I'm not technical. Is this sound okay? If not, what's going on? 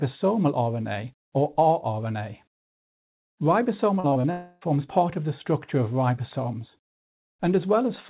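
No. From 4.00 to 4.25 s the sound turns choppy and robotic. That's repeated packet loss: four short gaps, the longest 34 ms, each patched by stretching the sound just before it.

Right after, from 4.31 to 4.63 s, there's a smeared buzz where the sound should be, most likely a long network dropout. The receiver kept stretching the last bit of sound to cover about 0.3 s that never arrived, so that part is lost. Throughout, the audio has the muffled phone-call quality of the call codec, with nothing above 4 kHz.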